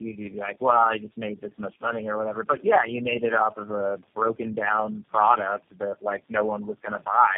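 Throughout, the speech shows tandem speech coding: it sounds passed through several low-rate speech codecs in turn, each re-coding the last one's damage, which fits a chain of about four. It is rough, muffled and warbly; a spectrogram shows nothing above 3.1 kHz and smeared formants.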